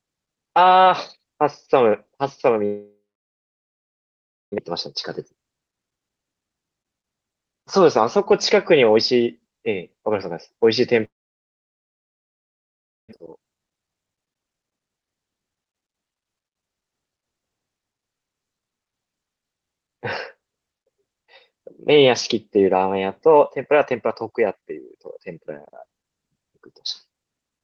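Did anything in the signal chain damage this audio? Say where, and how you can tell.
Yes, and it's the network, twice. At 2.65 s and again at 11.05 s the speech breaks off, the receiver stretches the last sound into a fading buzz for a moment, then it's basically silence until about 4.60 s and 13.15 s respectively. That's a long network dropout, likely packets simply never arriving, and when audio resumes about 1.6 s of it is just gone. You can also hear the call codec's band limit, nothing above roughly 8 kHz.

Right after each gap there's a jitter buffer speed-up: from 4.67 to 6.48 s the speech runs about 15% fast, and from 13.22 to 16.84 s about 12% fast, pitch unchanged, sounding a bit rushed. The buffer had built up extra delay when the late packets landed together, a few hundred milliseconds, so it trimmed out short pitch-period chunks over and over to catch back up.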